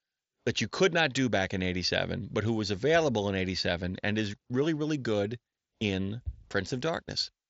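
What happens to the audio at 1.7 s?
Nothing goes wrong at 1.7 s: the speech there passes intact through the Bluetooth mSBC headset path, with no dropout, click or distortion.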